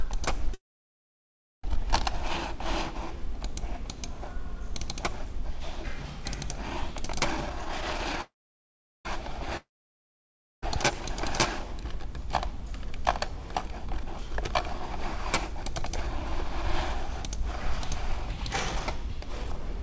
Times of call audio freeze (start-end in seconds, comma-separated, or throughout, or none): 0.54-1.65, 8.21-9.07